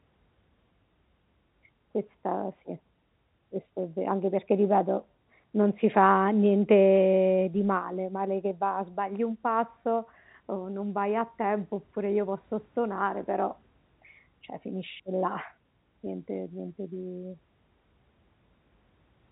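No technical faults can be heard in the speech, which has the narrow band of G.711 telephone coding, with nothing above 3.9 kHz.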